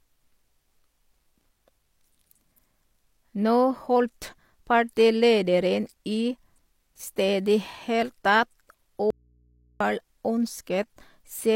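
A speech clip, and the problem is an audio dropout to a faint residue from 9.10 to 9.80 s. The signal cuts out abruptly for 0.7 s, leaving just mains hum roughly 40 dB below the speech, most likely a break in the source while the input stayed open and live.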